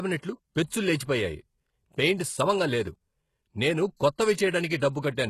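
Right through the speech, codec damage is plainly audible and nothing sits above 12.3 kHz, likely HE-AAC compression at a very low bitrate around 16 kbps, rebuilding treble by copying lower bands upward. At 3.96 to 4.00 s there's pre-echo: block-wide quantisation noise leaks about 40 ms ahead of an attack, so a short hiss comes before it.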